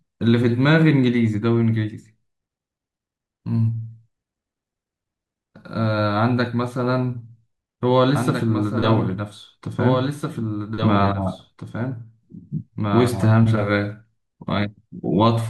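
Speech recording with a doubled audio track from 8.15 to 13.31 s. A second copy runs about two seconds late, roughly 5 dB quieter. It likely comes from a slower duplicate capture path.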